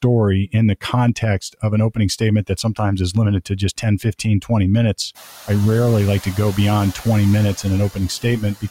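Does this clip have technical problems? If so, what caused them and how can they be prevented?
Yes. Speech is cut by the noise suppressor three times. From 2.47 to 2.8 s, between "of an opening statement" and "is limited", parts drop by about 13 dB. From 4.42 to 4.51 s, just before "minutes I rarely like", they drop by about 14 dB. From 8.22 to 8.65 s, they fall by about 19 dB. The suppressor treats quiet speech as noise and turns it down. Setting gentler suppression, or reducing room noise at the microphone, prevents this.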